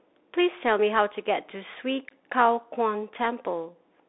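Throughout, the speech is thin and boxy, with nothing above 3.8 kHz, scratchy s sounds and grainy hiss, from the one-bit slope coding of a Bluetooth CVSD headset codec.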